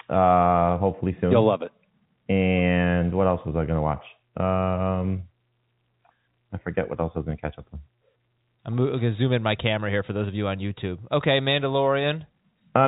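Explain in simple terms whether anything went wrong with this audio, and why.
No, nothing went wrong with this recording.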